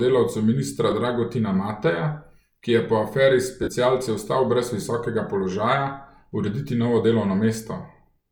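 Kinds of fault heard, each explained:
Lost LE Audio frames: the speech briefly smears into rough noise at 0.90 s and 3.63 s, the second just before "ostal brez visokega položaja". The LC3 decoder filled 15 ms and 45 ms gaps by repeating the last spectrum with random signs.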